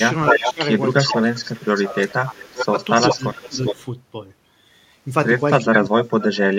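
Echo leak, 0.18 to 3.84 s: a copy of the speech returns about 390 ms late, only slightly quieter than the original, most likely because a loudspeaker's echo canceller let some of its microphone pickup through. Speech suppressed in double talk, 0.32 to 0.62 s, 1.06 to 2.74 s and 3.05 to 3.78 s: while both sides overlap, the talker dips by roughly 15 to 20 dB, likely because the canceller couldn't separate talker from echo and turned both down. Echo leak returns at 5.36 to 5.8 s with a delay of about 410 ms. Speech suppressed in double talk, 5.61 s to the end: the deepest drop, around 30 dB, nearly cuts the talker out.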